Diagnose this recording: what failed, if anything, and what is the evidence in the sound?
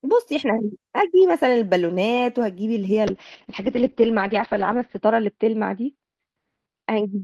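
Call bitrate drop, from 3.1 s to the end: the speech goes rough and muffled as the top end collapses from 20 kHz to 6 kHz. The bandwidth estimate fell, and the encoder backed off, consistent with around 32 dropping to about 8 kbps, coding coarsely and sitting at its lowest rate for about 1.9 s.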